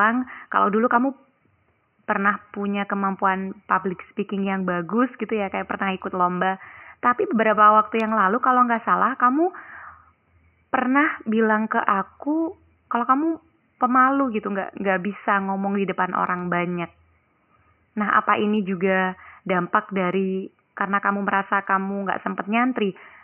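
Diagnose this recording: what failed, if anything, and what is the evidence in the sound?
Nothing in the signal chain has failed: the speech sits well clear of the room's own background noise, which lies about 51 dB below it and belongs to the recording space rather than to any stage of the system.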